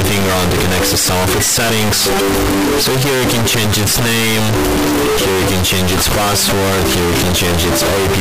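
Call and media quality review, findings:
Float read as integer, whole clip: sound slammed to a near-square wave at an almost fixed, high level, harsh and very loud, noise floor up level with everything else, pitch still traceable. Likely 32-bit float samples read as 32-bit integers somewhere in the decode path.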